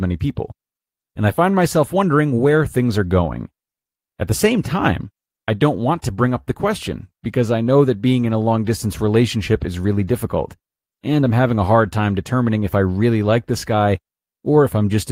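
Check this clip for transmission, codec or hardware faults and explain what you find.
There's a clock problem here, with the speech hiccuping in small, uneven steps the whole way through.

Clock drift between sender and receiver runs throughout: the sender's clock is about 4 percent fast, so the jitter buffer keeps overfilling and has to shed audio.

Repeated timing corrections run from 0.05 to 15.12 s, trimming short pieces to keep pace at 104 percent speed, heard as slight hiccups and a slightly unsteady tempo.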